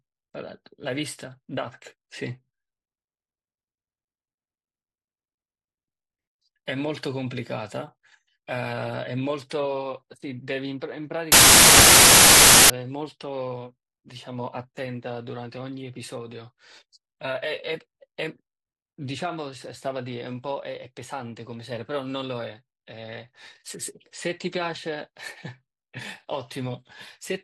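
Speech, broken from 11.32 to 12.70 s by samples built from the wrong bytes: misassembled sample bytes turn low bits into loud, harsh broadband noise, painting a solid broadband block on the spectrogram and a dense waveform slab.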